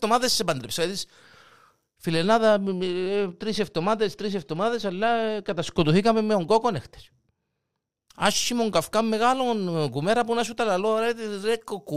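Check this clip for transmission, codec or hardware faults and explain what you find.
One fault shows up in the speech. From 2.05 to 8.08 s, de-emphasis was applied wrongly: a treble-cutting stage meant to reverse pre-emphasis acted on audio that didn't need it. The response falls smoothly with frequency, down about 10 dB at 10 kHz relative to 1 kHz, so the speech turns dull and muffled.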